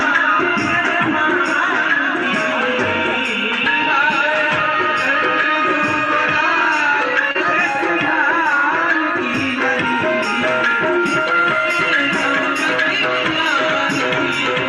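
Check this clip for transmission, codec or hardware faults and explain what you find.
There is one fault, a short concealed packet loss at 7.31 to 7.37 s. About 40 ms of audio failed to arrive in time, and the decoder improvised roughly 32 ms by extending the preceding sound before blending back. It heard as a brief smear rather than the hard silent gap of a plain dropout.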